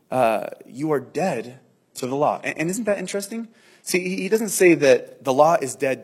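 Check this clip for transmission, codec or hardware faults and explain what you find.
One fault: an adaptive stream at a lower bitrate from 1.02 s to 5.02 s, right after "uh you are". A slowed connection pushed the player onto a low-rate rendition, which fits a switch from 96 kbit/s AAC to 16 kbit/s HE-AAC. The speech turns abruptly duller, with nothing above 12.3 kHz and more codec artefacts, and there is no gap at either switch.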